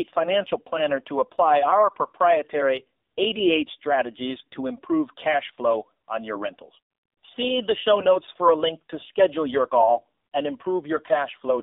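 Throughout this speech clip the voice sounds thin, buzzy and synthetic, confined to roughly 250 Hz to 3.7 kHz. This is the AMR narrowband mobile codec: 8 kHz sampling discards everything above 4 kHz, and the plainly audible coarseness fits a low mode near 7.4 kbps.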